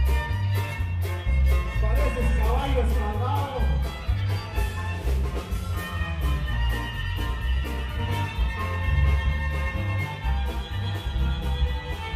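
At 8.39 s the audio abruptly drops in quality with no gap and stays degraded to the end: an adaptive stream at a lower bitrate. Codec artefacts rise, which points to a switch from roughly 96 kbit/s AAC to 32 kbit/s HE-AAC. On a spectrogram the top band becomes smeared and patterned.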